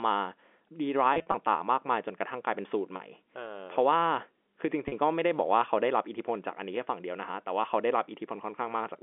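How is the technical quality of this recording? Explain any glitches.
The recording has three short glitches, carried over a telephone-band line of roughly 300 Hz to 3.5 kHz. Packet loss with pitch repetition occurs at 1.14 to 1.34 s, 2.96 to 3.00 s and 4.88 to 4.92 s. The receiver filled each gap by repeating the last pitch period. The first spreads 100 ms of loss over 200 ms. Each sounds like a brief, buzzy held tone.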